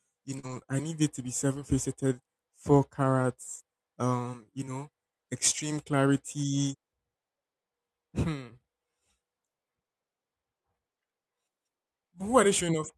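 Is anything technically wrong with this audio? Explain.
Yes. Short concealed packet loss occurs at 0.39–0.45 s and again at 0.63–0.66 s. About 40 ms of audio arrived too late for the decoder the first time and about 20 ms the second time. The receiver bridged each hole by extending the preceding speech, following its pitch where voiced and using shaped noise otherwise, then faded back into real audio. Each one is heard as a brief smear or wobble, and a quick consonant can drop out.

A lost packet rebuilt from error correction spans 0.43–0.73 s, where eight lost packets totalling about 140 ms were replaced. It happens again at 3.04 s with a single 20 ms packet, and at 5.54–5.60 s with two packets totalling 40 ms. Each lost packet's successor carried a low-bitrate Opus copy, so there's no gap. The substituted frames sound rougher and grainier.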